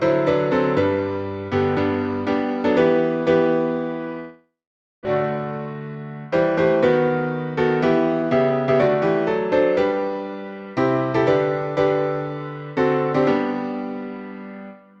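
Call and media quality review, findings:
Long network dropout, 4.19 to 5.07 s: audio stops, last sound continued as a fading buzz, then near-silence for about 0.52 s. Likely packet loss on the network path. About 0.6 s of content never returns; playback resumes later.

Jitter buffer speed-up, 5.14 to 6.05 s at 118% and 8.22 to 8.96 s at 106%: hurried playback, pitch unchanged. Receiver trims pitch-period pieces to drain backlog, removing about 0.2 s then about 50 ms.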